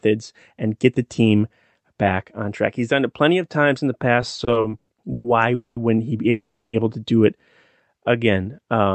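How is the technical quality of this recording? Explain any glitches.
The recording has clear timing faults in its second half. The audio stalls and stops, but nothing is lost. The sound travels through a call codec, and the top end stops near 8 kHz, which fits Opus.

From 4.21 to 5.27 s, just after "of times in the", there are repeated stalls (stutter). Packets arrived late over and over, so the jitter buffer kept running dry. The receiver stretched the last sound to fill nine gaps, the longest 120 ms. About a third of that stretch is filler, so the audio drags and judders.

Two call audio freezes follow. The first runs from 5.54 to 5.79 s, just before "he be able to". The second runs from 6.30 to 6.76 s, between "he be" and "able to do it". Both are likely caused by packets held up in transit. The buffer emptied, and the last sound continued and faded. The first freeze adds 220 ms, with 130 ms of silence. 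The second adds 430 ms, with 320 ms of silence. The audio then resumes where it stopped.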